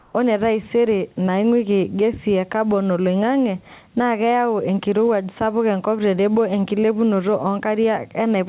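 Speech, heard through a narrowband call path with nothing above 4 kHz. From 0 to 0.14 s, comfort noise replaces the background, flat and about 3 dB quieter. Likely cause: discontinuous transmission, with the receiver synthesising the gap.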